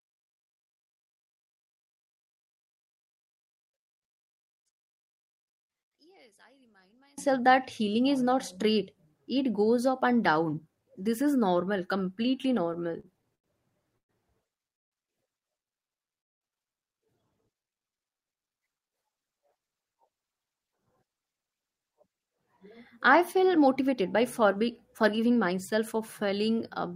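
From 0.0 to 7.18 s, just before "that healing is not", one stereo channel is likely inverted in polarity: summed to mono, the shared centre cancels, dropping the speech by about 37 dB and leaving only a faint residue of the channel difference.

From 12.73 to 13.47 s, just after "is normal completely", repeated stalls (stutter) set in: packets arrived too late, the jitter buffer ran dry six times, and the receiver stretched the last sound through each wait, the longest 89 ms. Nothing is lost, but the speech drags and catches.

Call audio freezes follow at 13.98 to 14.12 s, 14.75 to 14.94 s and 16.21 to 16.44 s, likely from packets held up in transit: each time the receiver briefly extended the last sound and then fell nearly silent, inserting pauses of 113, 165 and 198 ms before resuming where it stopped.

Jitter buffer slow-downs at 15.89 to 16.17 s and 17.53 to 18.28 s come from the receiver repeating single pitch periods to rebuild its reserve, adding 36 and 88 ms. 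Speech runs at about 90% speed at unchanged pitch, sounding drawn out.

Jitter buffer speed-ups then trim an overfull buffer by cutting short pitch-period pieces: around 400 ms goes from 19.87 to 24.62 s at 108% speed, and around 50 ms from 25.03 to 25.52 s at 111%, so the speech sounds hurried at the same pitch.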